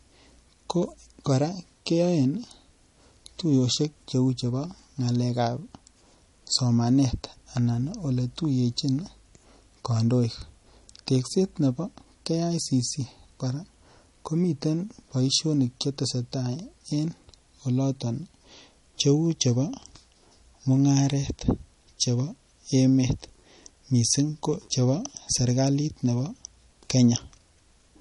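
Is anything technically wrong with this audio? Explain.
Yes. Throughout the speech, the audio was likely squeezed through MP3 compression at a low bitrate, which fits roughly 40 kbps. Starved of bits, the encoder cut everything above 11.1 kHz and kept dropping weak frequency lines frame to frame, leaving plainly audible watery swirl, metallic chirps on s sounds, and dulled treble.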